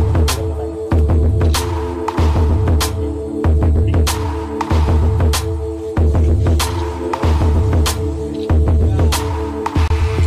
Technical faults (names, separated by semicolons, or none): damaged data in a compressed stream